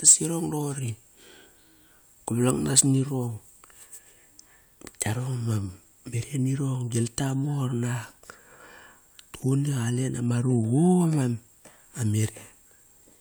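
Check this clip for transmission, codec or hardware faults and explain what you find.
Hard clipping at 0.07 to 0.14 s, just before "irong doqori", and again at 2.50 to 2.80 s: the speech drives a stage about 7 to 8 dB past what it can pass, so peaks are sliced flat, adding high harmonics heard as a harsh, crackling fuzz on the loud syllables.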